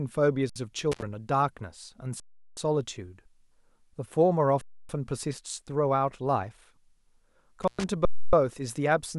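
At 0.50 s the speech freezes for 62 ms in an underrun with held sample. The output buffer runs dry and the converter holds its last value, so the waveform sits flat, usually away from zero, and the sound stops with barely a click. Playback resumes where it left off, so the restart is soft. From 0.92 to 1.02 s an intermittent contact opens the line for 73 ms, cutting the speech with crackle at both edges and leaving faint hiss in the gap. The same underrun returns at 2.20 to 2.57 s for 372 ms, a length that fits a 16384-sample buffer, and again at 4.61 to 4.89 s for 279 ms. A second contact break at 7.62 to 7.84 s opens for 110 ms with the same edge crackle. A final 279 ms underrun follows at 8.05 to 8.33 s.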